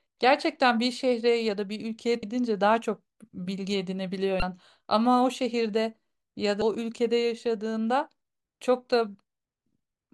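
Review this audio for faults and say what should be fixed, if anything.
Damaged data in a compressed stream: bytes in the encoded speech were corrupted, so the decoder misread the affected frames, lost sync and hunted for the next valid frame header. Each time this produces a brief chirp or blip of about 30 ms, at 2.20–2.23 s, 4.39–4.43 s and 6.59–6.62 s. The hits recur at a steady interval of roughly 2.2 s. Carry the stream over a checksummed, error-protected path and verify file integrity after each copy or transfer.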